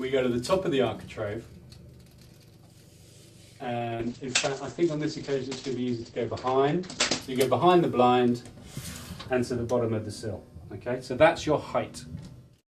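At 3.64 s a call bitrate drop sets in and lasts until 7.27 s. The bandwidth estimate collapsed, so the encoder coded far more coarsely, which points to a fall from about 96 kbps to roughly 11 kbps. The sound turns rough, watery and muffled for about 3.6 s. On a spectrogram, energy above 8 kHz vanishes abruptly where it had reached 20 kHz, leaving a flat ceiling, and the retained band looks smeared and blotchy until full detail returns.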